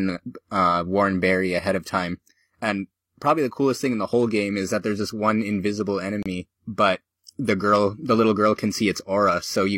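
At 6.23 to 6.26 s in this speech clip, right after "there's this one invisible" and before "but the girl the", there is a gap between stream segments. The timestamps of two consecutive segments don't quite meet, so the player fills the hole with about 31 ms of silence. It sounds like a brief, hard-edged dropout in the flow of speech. Nothing is missing from the content, because the silence is inserted rather than replacing audio. Its position suggests a segment boundary at about 6 s.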